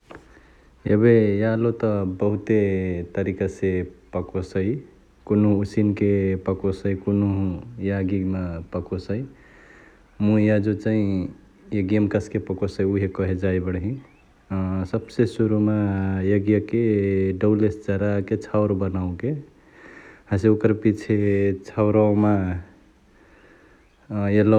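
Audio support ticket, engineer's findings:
No faults found on listening; signal path and speech recording present as normal, with no dropouts, clicks, distortion or level anomalies to attribute to any component.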